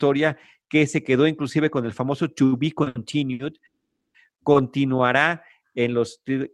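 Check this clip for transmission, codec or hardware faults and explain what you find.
Two kinds of transmission fault are present in this speech clip, both from packets arriving late over the network.

Short stalls from a late packet occur at 2.83–2.88 s, 2.88–2.97 s, 3.33–3.41 s and 4.52–4.56 s. Each time the jitter buffer ran dry, so the receiver held the last sound for 30, 70, 60 and 20 ms until the packet turned up, then resumed at the same point. Nothing is lost, but a syllable drags with a faint buzz. On a spectrogram these appear as short horizontal smears of repeated harmonics. In the waveform they show as a brief stretch of near-identical cycles.

A call audio freeze runs from 3.66 to 4.16 s. The sound stretches and fades into roughly half a second of silence (about 470 ms), and then the audio carries on where it stopped, pushing everything after it later by 480 ms. The likely cause is a burst of packets held up in transit that emptied the jitter buffer. 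A spectrogram shows a fading smear followed by a blank vertical band, and the waveform drops to a flat line.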